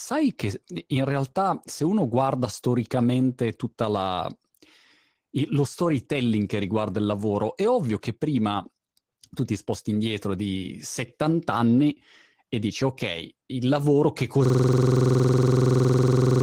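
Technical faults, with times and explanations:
Throughout: Opus voice compression. The damage is plainly audible. The speech has the muffled, slightly hoarse quality of linear-prediction coding with a coarsely quantised excitation signal. The codec runs in hybrid operation, where a SILK core handles the range up to 8 kHz and a sparse CELT layer fills in above it. The overall degradation points to a low voice bitrate of around 16 kbps with 20 ms frames.
14.46–16.43 s: system hang loop. Right after "ok il lavoro che", the audio freezes into one 46.44 ms fragment that repeats identically, about 43 times, until the end of the clip. At 21.5 repeats per second it comes across as a rapid machine-gun stutter rather than a steady buzz. This is the signature of a stalled host or driver while the audio hardware keeps replaying its ring buffer, and the loop length fits a 2048-sample buffer.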